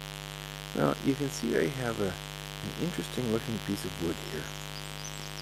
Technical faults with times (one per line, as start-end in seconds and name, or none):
0.00-5.42 mains buzz